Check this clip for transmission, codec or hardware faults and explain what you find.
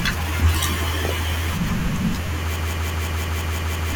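One hardware fault is present. From 2.56 to 3.93 s, a system hang loop replays one 171 ms chunk eight times, which fits an 8192-sample ring buffer. It gives a machine-gun stutter at about 5.9 Hz, seen as identical repeating waveform blocks, and roughly a second and a half of speech is lost.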